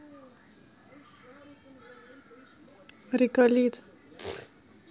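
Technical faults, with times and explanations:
No technical faults, so there are no times or explanations to give.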